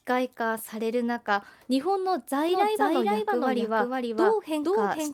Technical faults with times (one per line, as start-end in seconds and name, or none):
2.49-5.13 doubled audio track